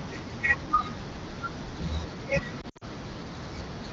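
A short speech recording with lost AMR speech frames between 2.61 and 2.84 s. Radio errors corrupted frames, and the decoder filled each gap by repeating the last good pitch and vocal tract settings at falling gain. About 120 ms of audio drops out, scattered over roughly 200 ms, with the longest run near 60 ms. The speech dips and warbles, then sags toward silence before recovering roughly. On a spectrogram, frozen, smeared harmonics fade in brief patches. The waveform shows short envelope dips. The clean 7 kHz band points to AMR wideband (HD Voice) at a mid-to-high rate, adding only light coding grain.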